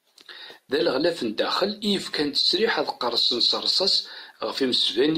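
At 4.56 s, compressed frames were skipped: roughly one frame never reached playback, so speech jumps ahead about 20 ms.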